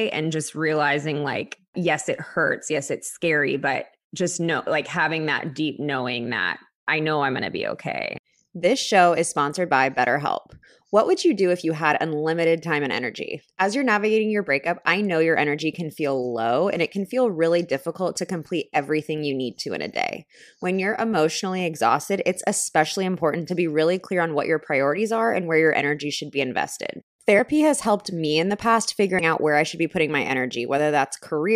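Compressed frames skipped at 29.19 to 29.21 s, between "me in the past" and "out where I should": whole frames of the coded speech were never decoded, either lost from the stream or rejected as corrupt, so the audio leaps forward by around 70 ms.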